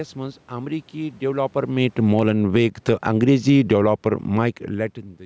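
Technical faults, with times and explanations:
1.25 to 3.92 s, automatic gain falling: just after "منٛز امریكی" the automatic gain control judged the input too loud or its background noise too strong and pulled its gain down by about 13 dB over nearly three seconds, so the speech and the room noise behind it sink together rather than the voice alone fading.
3.82 to 4.53 s, automatic gain rising: the input dropped by about 24 dB, and the gain control answered by raising its gain about 4 dB over roughly 0.7 s, so voice and background swell back up together.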